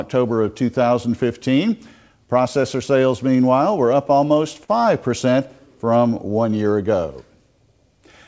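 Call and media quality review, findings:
Repeated stalls (stutter), 4.08–4.70 s. Four brief hitches, longest about 44 ms, roughly 69 ms stretched in total, nothing dropped. Likely jitter buffer underrun from late packets; the last sound is held and extended until audio resumes. Spectrogram: short smeared, held bands at each hitch; waveform: repeated near-identical cycles. Band above 8 kHz empty throughout, consistent with the G.722 call path at 64 kbps.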